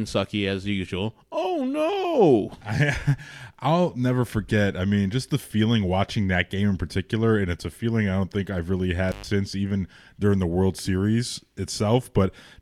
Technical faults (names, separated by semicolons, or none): intermittent contact